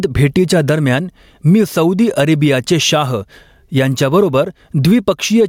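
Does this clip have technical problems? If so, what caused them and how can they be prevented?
Yes. The speech has gain pumping from start to finish. The level swings by about 10 dB. Loud and quiet passages sit unnaturally close together, so the delivery sounds squashed. The likely cause is input gain set far too high, with a fast limiter or compressor clamping down on each peak. To prevent it, lower the input gain and use gentler, slower dynamics processing.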